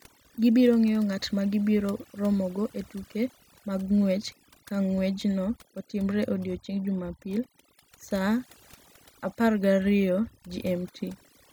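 From start to finish the speech carries overdone noise removal. A noise reducer was set too hard. It cuts individual frequency bands whenever they sit near its noise estimate. Quiet speech detail goes too. The background drops and breaks up into twinkling specks.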